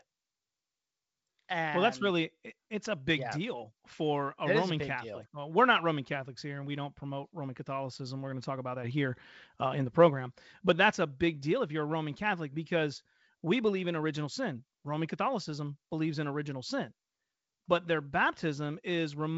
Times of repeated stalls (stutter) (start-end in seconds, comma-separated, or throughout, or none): none